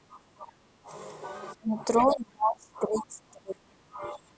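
From 0.0 to 0.25 s and 0.41 to 0.92 s the speech dips by about 20 dB, then from 1.57 s to the end by up to about 35 dB. This is speech suppressed in double talk, likely an echo canceller ducking the talker while both sides spoke. The waveform envelope collapses in patches, and the spectrogram shows faded, gappy bands. Between 1.97 and 2.15 s a faint second voice, about 25 dB below the speech, is the other side's voice leaking through, likely loudspeaker echo the canceller missed. On a spectrogram it appears as a weak, separate harmonic trace beneath the suppressed speech, under the call processing's 8 kHz ceiling.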